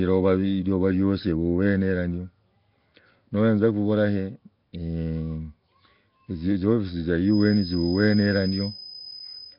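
Throughout, the speech has a rough, hissy, underwater smear, likely from heavy Nellymoser compression. A spectrogram shows noise-filled patches and nothing above 5.3 kHz. From 7.21 s to the end, a feedback whistle rings at 5 kHz, roughly 10 dB below the speech. It shows on a spectrogram as one thin horizontal line.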